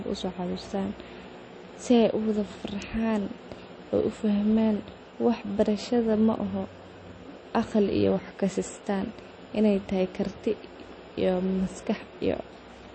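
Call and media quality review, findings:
Speech throughout: watery, swirly artefacts, treble gone above 8.4 kHz. Likely MP3 compression at low bitrate, fits roughly 32 kbps. Spectrogram: hard ceiling, flickering holes in weak bands.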